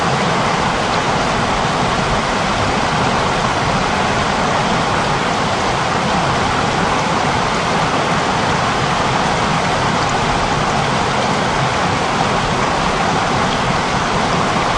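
Nothing in this audio stands out as a technical fault at any point, so there's no problem here to describe.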